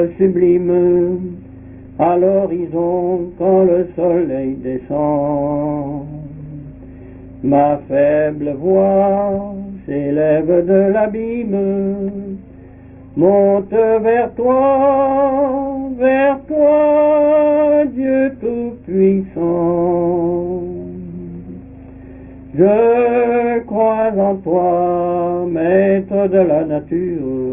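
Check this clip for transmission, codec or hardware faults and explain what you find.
Nothing stood out on listening to this clip.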